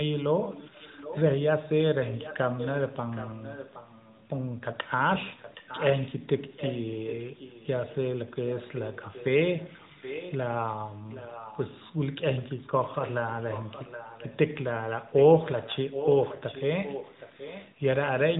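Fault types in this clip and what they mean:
Echo leak: from 12.37 to 14.37 s a faint, delayed copy of the speech trails the original by about 770 ms, sitting well below it. That's likely a speakerphone on the far end whose echo canceller let some of its own pickup slip back, heard through the band-limited mobile path.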